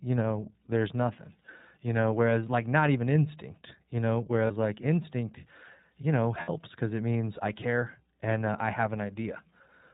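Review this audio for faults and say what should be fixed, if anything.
The whole clip carries iLBC codec damage, and it is plainly audible. Nothing above 4 kHz survives. The speech sounds rough and slightly synthetic. The framing fits iLBC's 30 ms mode, at about 13.3 kbps. To prevent it, send the call over a wideband codec such as Opus.

There are lost iLBC frames at 4.47 to 4.51 s, after "even instinct you know", and at 6.41 to 6.49 s, after "like instinct you know". The gaps last 30 ms and 60 ms, which fits one and two lost frames. The decoder fills each gap with a held, slightly buzzy or breathy repeat of the last pitch cycle. The speech recovers almost at once. To prevent it, reduce packet loss on the network or add forward error correction.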